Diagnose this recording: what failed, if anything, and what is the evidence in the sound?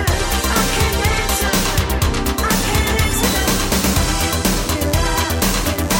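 Mains buzz enters in the analogue wiring at 2.57 s and continues to the end: a steady, raspy buzz roughly 15 dB below the signal. Sharp switching spikes at twice the 50 Hz mains rate stack harmonics up into the kilohertz range, pointing to poor shielding or grounding.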